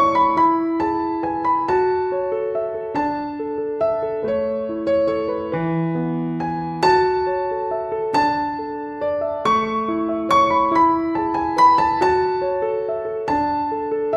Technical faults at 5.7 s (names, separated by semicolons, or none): crude rate conversion